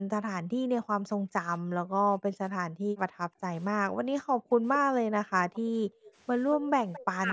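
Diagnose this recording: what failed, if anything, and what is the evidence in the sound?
The echo canceller in the call processing chain failed in two ways. The background is gated by the echo canceller in four places. The room sound drops by about 40 dB between 0.0 and 3.42 s, for roughly two seconds in all. It drops again by about 40 dB between 3.89 and 5.08 s, for well under a second. Shallower dips follow, about 25 dB between 5.6 and 6.05 s and about 13 dB at 6.60 to 6.67 s. Each time, the canceller clamped the microphone while the far-end loudspeaker played, and the background returned once it released.

Echo leak is heard four times. A delayed copy of the speech sits 222 ms behind the original. It is strongest at 4.49 to 4.78 s, about 10 dB below the speech. Fainter scraps come at 5.53 to 5.60 s and 6.05 to 6.11 s, about 25 dB down. A longer stretch at 6.51 to 7.01 s is about 15 dB down. 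The fixed delay points to an acoustic path from loudspeaker to microphone. The likely cause is that the canceller did not fully model that path and let residual echo through. The normal high-pass filter of the call processing also trims the lowest bass.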